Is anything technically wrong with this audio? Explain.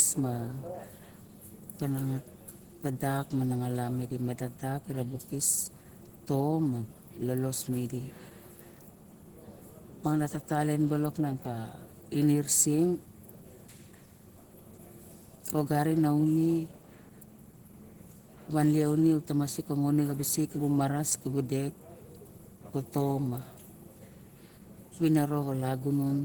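Yes, there's plainly audible Opus compression throughout, most likely from a low-rate encode in Opus's hybrid speech mode, which fits something around 16 kbps. Starved of bits, the encoder fills out the upper bands approximately, so the speech sounds muffled and hoarse, with a grainy roughness.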